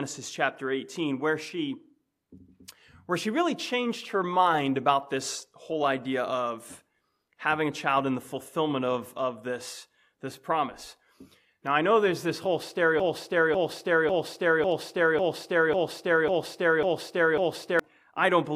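Broken-record loop, 13.00 to 17.79 s: a 0.55 s fragment repeats nine times, likely a stalled stream resending its last piece, and the audio due then is lost.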